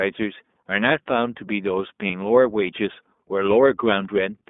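A speech clip carried through the iLBC codec, heard as narrowband audio confined to roughly 200 Hz to 3.6 kHz, with plainly audible roughness and a slightly synthetic edge; the character fits iLBC's 20 ms frame mode at 15.2 kbps, and the absence of smeared, warbly transients distinguishes it from low-bitrate transform codecs. From 2.08 to 2.11 s there are lost iLBC frames: a brief held, faintly buzzy vowel where the decoder repeated the last pitch cycle, consistent with one missing 20 ms frame. The speech recovers immediately afterward, unlike codecs whose errors linger into following frames.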